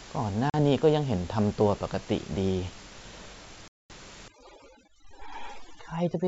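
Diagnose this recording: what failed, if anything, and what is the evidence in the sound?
Packet loss on an ADPCM call (network): hard silent holes at 0.50–0.55 s and 3.68–3.91 s, the second about ten packets' worth. Unlike a plain dropout, each restart comes back slightly distorted while the predictor resyncs.

Overdone noise removal (call processing): from 4.28 s to the end the background collapses into twinkling specks. This is aggressive spectral gating, not codec hiss.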